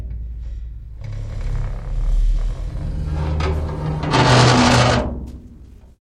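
From 4.44 s to the end, a time-stretched section plays at about 1.75 times normal pace while the pitch stays unchanged, so the sound turns rushed. Software likely squeezed this part to fit a length by dropping short pieces of audio.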